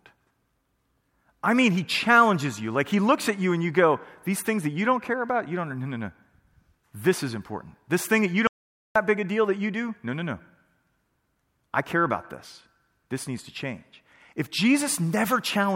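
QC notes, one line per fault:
8.47–8.96 s audio dropout to silence: after "thing that you" the speech drops to total silence, no room tone, for 0.48 s before "big a deal that", likely from a lost input written as silence.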